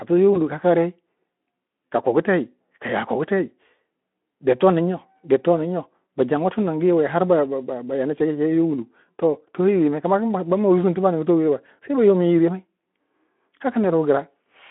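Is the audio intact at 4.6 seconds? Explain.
Yes, the speech at 4.6 seconds is intact, with no fault present at that moment.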